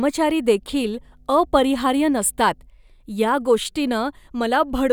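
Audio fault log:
0.59–2.69 s, mains hum: a steady 50 Hz tone sits roughly 35 dB below the speech, the power line coupling into the signal through a ground loop or nearby transformer. Unlike broadband rumble or wind noise, it holds one fixed low pitch with some low harmonics.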